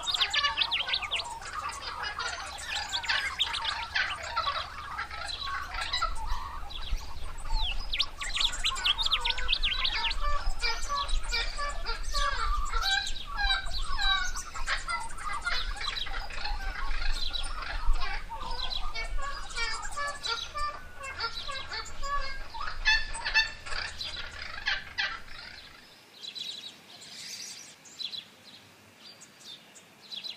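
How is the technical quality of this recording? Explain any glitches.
The recording has three distinct glitches: a sudden jump forward, a stretch that runs slightly fast, and a brief doubled passage near the end.

At 3.43 to 3.45 s there is a skip ahead. Roughly a second of audio was dropped in transit or discarded by an overflowing jitter buffer, and playback splices the two sides together with no fill, so the sound lurches abruptly forward.

From 3.59 to 9.09 s a jitter buffer speed-up follows. The buffer was holding excess audio, so the receiver trimmed many short pitch-period fragments, about 300 ms in total. The sound plays at 106% speed with unchanged pitch and comes across as slightly hurried.

From 26.36 to 27.74 s a doubled audio track appears. A second full-band copy, about 5 dB quieter, trails the original by roughly 150 ms with no reverberant decay, and it starts and stops abruptly. 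This is likely from a second, slower capture path mixed in.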